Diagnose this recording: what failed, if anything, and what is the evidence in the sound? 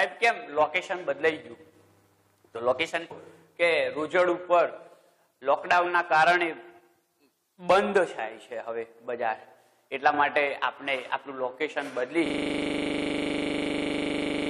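A brief 18 ms disruption at 3.1 s points to damaged data in a compressed stream at the codec stage. Corrupted bytes made the decoder misread a frame, lose sync and resume at the next valid frame header.

From 12.26 s to the end, one 40 ms fragment repeats about 56 times, producing a rigid 25 Hz buzz-stutter. This is a system hang loop at the driver or buffer stage: the system froze while the hardware kept replaying a 40 ms ring buffer.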